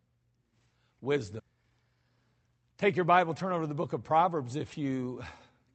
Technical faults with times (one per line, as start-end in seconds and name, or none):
1.39-1.41 skip ahead
1.49-2.25 jitter buffer speed-up